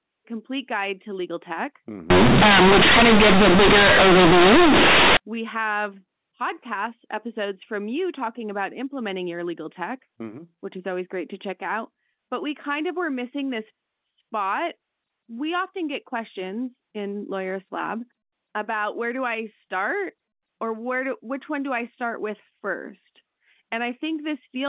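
Companded audio read as linear hits this speech clip from 2.10 to 5.17 s: A-law telephone bytes are played as raw 8-bit samples without expansion, so quiet passages swing as wide as loud ones, giving harsh, very loud buzzy distortion and heavy noise in pauses.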